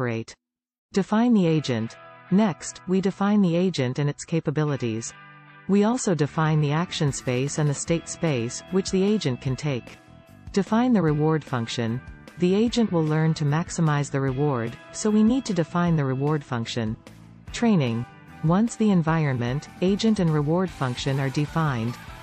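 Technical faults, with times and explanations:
Nothing stood out on listening that would count as a technical fault.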